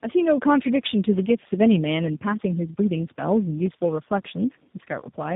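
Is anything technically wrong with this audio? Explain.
Yes. Tandem speech coding runs throughout the speech. The sound points to about three speech codecs in series, each decoding and re-encoding the previous stage's already damaged output, so the errors compound. Nothing reaches above 3.8 kHz, which makes the speech muffled. The stacked coding adds a rough, gritty texture and a warbly, watery wavering that is worse than any single codec would produce, which fits a chain that starts and ends on an 8 kbit/s coder.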